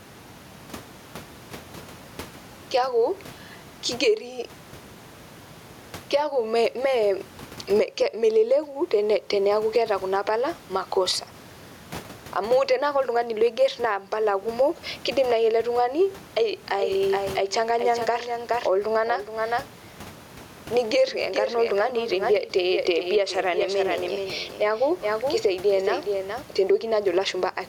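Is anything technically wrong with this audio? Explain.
Yes. Gain pumping runs throughout, swinging about 15 dB, likely from excessive gain driving a fast limiter. The room noise sits about 31 dB below the speech. A doubled audio track appears from 16.78 s to 26.42 s: a full-band copy about 10 dB quieter trails around 400 ms behind, likely a second, slower capture path. Unlike a room echo, it has no decay and starts and stops abruptly.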